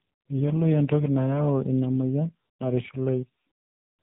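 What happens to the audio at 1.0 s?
At 1.0 s, as throughout the speech, tandem speech coding is audible: two speech codecs in a row, the last of which sounds like AMR-NB at a low rate. Each coder reworks the previous one's errors, leaving rough, muffled, warbly speech with nothing above 3.8 kHz.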